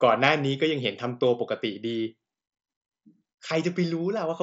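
No technical faults turn up anywhere in this speech clip. It passes through a working Bluetooth mSBC headset codec, which holds the speech to a band of about 8 kHz and adds a light grain on louder moments, with the weakest upper bands slipping in and out.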